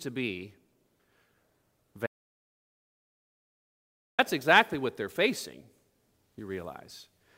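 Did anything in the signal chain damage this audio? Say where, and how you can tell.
Yes. The speech cuts out abruptly at 2.07 s and stays in dead digital silence, with no room tone or noise floor at all, until it resumes mid-flow at 4.19 s on "exactly what they're facing". This is an audio dropout to silence lasting about 2.1 s. Whatever was said in that stretch is gone. The cause is likely a lost input at the capture stage, such as a disconnected device, a broken link or a momentary mute, while the recorder kept writing silence.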